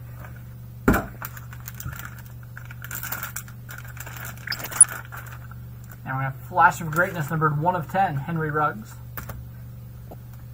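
DAB burbling breaks in at 1.14 to 1.28 s, again more heavily at 4.47 to 4.83 s, and briefly at 10.08 to 10.14 s. Bit errors slipping past error correction corrupt MP2 samples and scale factors, so individual sub-bands jump in level for up to a frame, giving watery blips in the light patch and bubbling, chirpy squelches in the heavier one. The middle burst is the longest and densest, which points to a higher error rate, under one percent.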